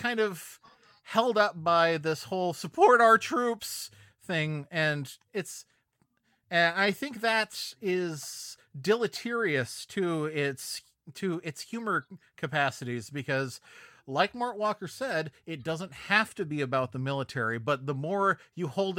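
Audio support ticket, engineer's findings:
No fault found on listening to the speech clip. Nothing heard points to a failing component or stage.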